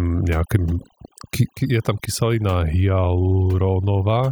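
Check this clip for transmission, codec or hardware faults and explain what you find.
Overdone noise removal runs through the whole speech clip, from start to finish. A noise reduction stage set far too aggressively is pulling individual frequency bands down hard, or shutting them off, whenever their level sits close to its noise estimate. Quieter parts of the voice fall under that threshold too and get cut with the noise. The result is a background that drops and breaks up into twinkling, chirpy specks.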